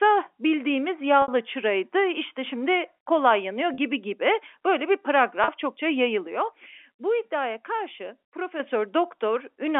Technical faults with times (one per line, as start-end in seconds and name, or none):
1.22-1.28 packet loss with pitch repetition
3.74-3.78 packet loss with pitch repetition
5.44-5.48 packet loss with pitch repetition
6.27-8.60 sudden gain jump